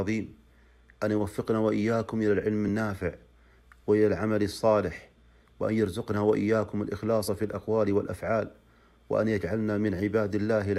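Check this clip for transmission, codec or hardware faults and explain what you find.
One codec fault turns up. Compressed frames skipped at 7.27 s: a single damaged or missing frame was never decoded, so playback jumps forward by roughly 20 ms, which fits a frame of about 23 ms. The join is heard as a brief glitch where the audio jumps ahead.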